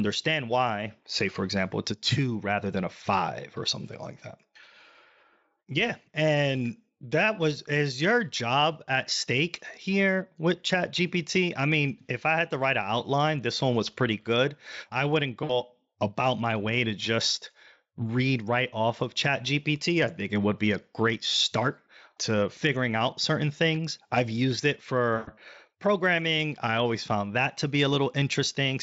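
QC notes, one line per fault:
15.43–15.55 s and 25.15–25.33 s, VoIP packet loss concealed by the speech codec: after "pretty good I wouldn't" about 60 ms of audio drops out, and after "things I've used it" about 120 ms, which fits three and six 20 ms frames. The Speex decoder fills each gap by repeating its last pitch and spectral shape at falling gain, so the sound is stretched into a buzzy tone or coloured noise that fades before "about my way to" and "programming I always found". On a spectrogram, harmonics run flat and smeared across the gap; the waveform shows a repeating cycle shrinking in amplitude.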